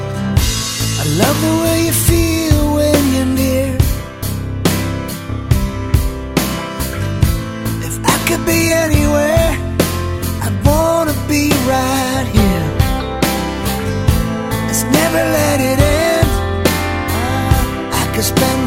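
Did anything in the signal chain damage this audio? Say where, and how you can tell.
No, nothing stood out on listening that would point to damage at any stage of the chain.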